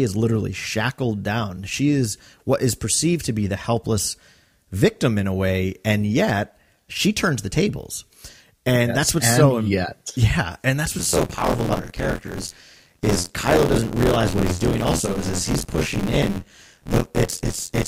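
From 10.98 s, just after "and that's", a robotic buzz or rattle at 86.1 Hz sits on the speech through to the end of the clip, present only while there is signal. This is buffer tearing: the writing program and the playback hardware have drifted so they cross inside every period. Around two fifths of each buffer holds audio roughly 40 ms old, spliced in with hard joins on both sides, a rate that fits a 512-sample buffer.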